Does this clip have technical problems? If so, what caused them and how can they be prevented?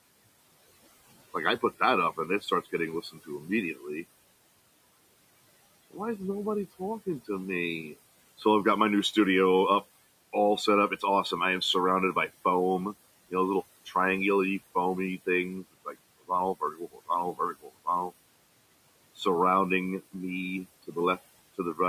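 Yes. Noise suppressor artifacts run throughout: the suppressor pulls steady background down by about 19 dB frame by frame, so the residue breathes between phrases and rises under the speech. A gentler suppression depth or a longer noise-estimate smoothing time would prevent this.

Speech cut by the noise suppressor occurs at 2.17 to 3.85 s, dipping about 13 dB over roughly a third of a second, and at 15.63 to 18.11 s, dipping about 21 dB over roughly 0.7 s. Soft speech was classified as noise and attenuated with it. The room noise sits about 20 dB below the speech, so a less aggressive threshold would keep these quiet passages intact.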